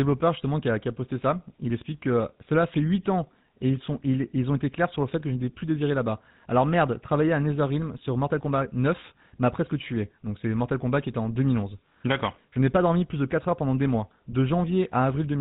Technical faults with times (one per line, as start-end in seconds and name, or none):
0.00-15.41 GSM full-rate codec